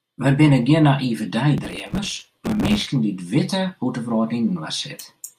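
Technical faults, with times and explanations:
1.58–2.87 s: processor overload crackle. For about 1.3 s the processor misses buffer deadlines repeatedly, around a hundred of them. Each missed buffer, roughly 5 ms long, replays stale audio with hard edges. Together they stack into a gritty crackle over the speech.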